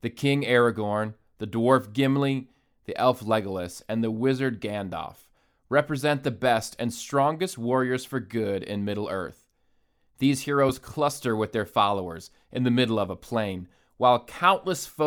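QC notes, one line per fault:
No faults heard in the speech recording.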